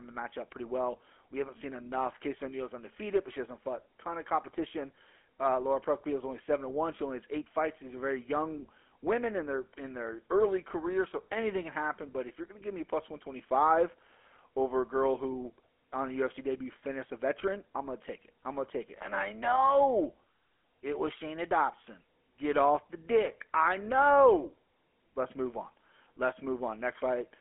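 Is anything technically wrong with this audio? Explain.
Yes. Throughout the speech it carries GSM full-rate codec damage, plainly audible. The vocal tract is modelled and driven by coarse regular pulses, giving a buzzy, gravelly roughness that fits a 13 kbps rate. Nothing sounds above 3.8 kHz within a 300 to 3400 Hz line band; a plain telephone filter would narrow the sound without that grit.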